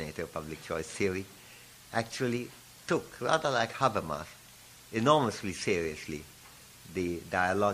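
Throughout the clip the sound has a plainly audible watery, swirly quality: weak detail flickers in and out from frame to frame, and attacks are smeared. This is likely MP3 compression, where an encoder short of bits zeroes weak frequency lines. The damage fits a bitrate around 64 kbps.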